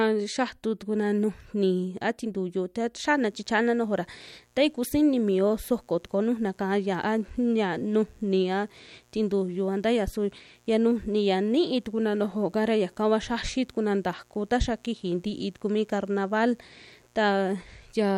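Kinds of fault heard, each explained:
Mains buzz: Sharp switching spikes from the power supply leak into the audio twice per 60 Hz cycle, spreading harmonics into the kilohertz range. Here a steady, raspy buzz enters at 3.04 s and runs to the end, faint, roughly 40 dB under the speech.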